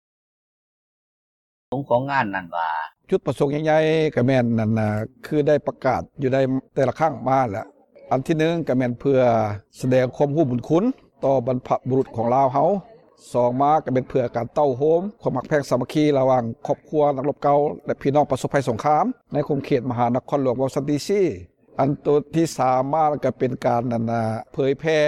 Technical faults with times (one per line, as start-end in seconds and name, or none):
0.00-1.72 cut-off start